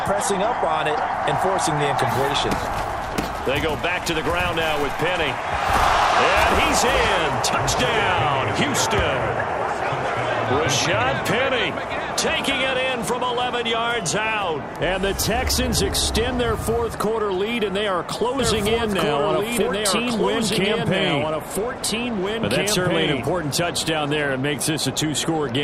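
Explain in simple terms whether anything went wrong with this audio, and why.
Something did go wrong. From about 18.4 s to 24.3 s there is a doubled audio track. The same sound plays twice at once, with the second copy trailing about two seconds behind. The copy is roughly as loud as the original, so the two overlap and clash. It is not an echo. It has no fading tail and no room sound, and it starts and stops suddenly. The likely cause is the sound being recorded a second time through a slower path, or an edit leaving two copies out of line.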